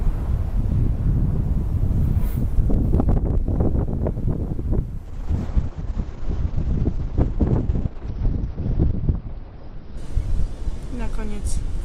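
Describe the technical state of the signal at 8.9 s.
At 8.9 s the signal is inside a call bitrate drop running from 5.06 to 10.79 s. The bandwidth estimate fell, the encoder was given far fewer bits, and the coarse, muffled result fits a fall from about 48 to 8 kbps, held at its lowest for 3.91 s. On a spectrogram the top edge sinks from 20 kHz to 6 kHz, leaving an empty band above it until the bitrate recovers near 10.79 s.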